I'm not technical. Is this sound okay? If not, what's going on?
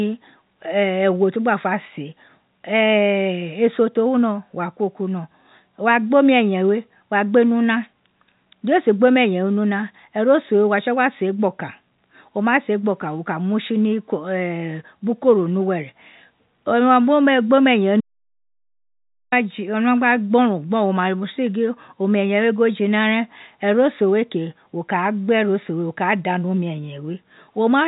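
No. From 18.01 to 19.32 seconds the speech cuts out into total silence, an audio dropout to silence losing about 1.3 seconds, likely from a brief disconnection or mute. Unlike a natural pause, even the background room sound vanishes. The narrow, phone-like tone comes from ordinary telephone coding.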